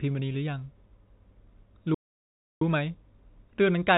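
Clock drift between sender and receiver runs through the whole of this speech, with the sending side's clock running a few percent fast, roughly 4 percent. Because the receiver consumes samples more slowly than they arrive, its jitter buffer keeps filling. The result is not one obvious break but a restless, faintly hurried quality that never settles. It is distinct from random network jitter because the pressure always pushes the same way instead of wandering back and forth.

Repeated timing corrections follow from that drift, running from 0.04 s to 3.98 s. To keep the buffer from overflowing, the receiver trims short slices out of the stream again and again, giving an effective rate of 104 percent. Each cut is tiny and the spacing is uneven, so the speech sounds slightly clipped in places, with small hiccups and an unsteady pace. Unlike a packet-loss concealment glitch, nothing is smeared or synthesised. 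Material is simply skipped, always in the same direction.

A playback stall then interrupts the audio from 1.94 s to 2.62 s, a silence of about 0.67 s in mid-flow before the speech resumes. The output simply stopped, most likely because the player ran out of data or its playback thread was briefly blocked. Its length and complete silence separate it from the millisecond-scale corrections around it, and it is not a dropout inside the codec. The narrowband call codec, cut off above 4 kHz, carries on as expected on either side of the gap.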